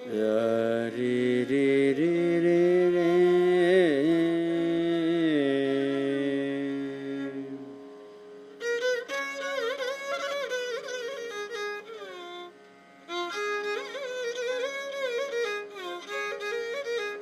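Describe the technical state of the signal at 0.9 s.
Nothing goes wrong at 0.9 s; the signal is intact there.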